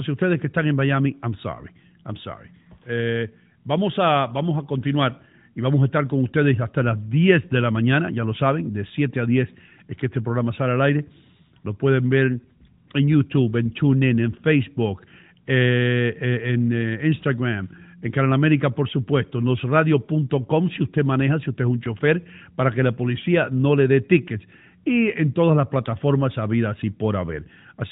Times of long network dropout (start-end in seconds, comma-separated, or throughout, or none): none